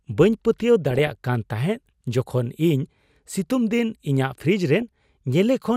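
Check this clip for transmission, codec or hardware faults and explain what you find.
Three bursts of DAB burbling occur in the speech, at 0.91 to 1.15 s, 3.28 to 3.36 s and briefly at 4.82 s. Weak reception let bit errors, at a rate of a few tenths of a percent, slip past the error correction into the MP2 audio data. Corrupted samples then put short blips of noise into single sub-bands, and corrupted scale factors, where they got through, made sub-bands jump in level for up to a frame. Each burst adds short blips of noise over the speech.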